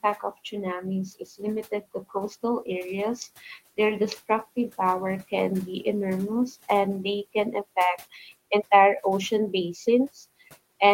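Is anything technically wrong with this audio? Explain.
Yes. From 1.71 to 2.44 s there is speech cut by the noise suppressor: it misjudged parts of the speech as background and attenuated them by up to about 12 dB. Roughly a tenth of a second in total sounds swallowed or faint, while room noise sits about 25 dB below the speech.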